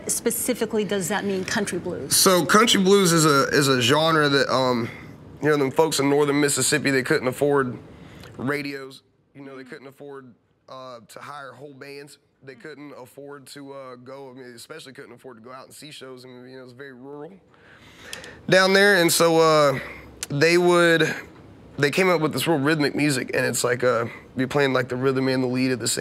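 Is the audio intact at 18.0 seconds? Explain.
No. At 18.0 s the audio is inside a zipper noise span running from 17.05 to 18.18 s. A level change of roughly 20 dB is applied in unsmoothed 3 dB steps, about five per second, and each jump produces a small click, giving an audible ticking across the fade.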